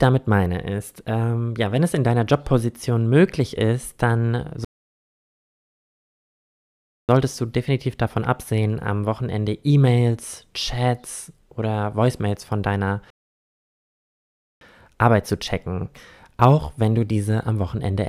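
A rebuffering stall hits at 4.65 s, right after "möglich ist dann": the speech drops to silence for about 2.44 s and picks up at 7.09 s with "du definitiv davon absehen". A second stall follows "von deiner" at 13.10 s and lasts about 1.51 s, until 14.61 s. Each time the player exhausted its downloaded audio and paused for more, so the speech resumes exactly where it broke off, with nothing missing but extra time inserted.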